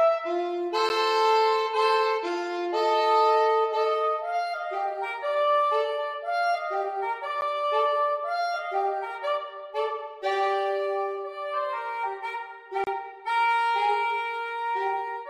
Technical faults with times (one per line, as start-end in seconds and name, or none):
0.89 block of digital silence
7.41 block of digital silence
12.84-12.87 block of digital silence